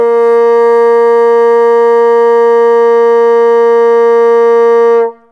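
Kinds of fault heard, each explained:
No technical faults can be heard in this music recording. There is nothing here to list or explain.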